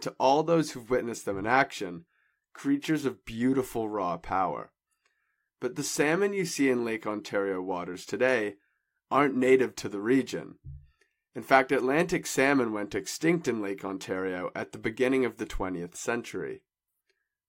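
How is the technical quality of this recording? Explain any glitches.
No technical faults or glitches can be heard here.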